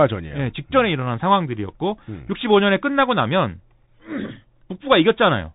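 From start to finish the speech carries the Bluetooth CVSD headset codec sound: nothing above 3.8 kHz, s sounds scratchy, and a grainy hiss underneath. It's the one-bit up/down coder struggling to track fast, bright detail, and the damage fits a 64 kbps CVSD link.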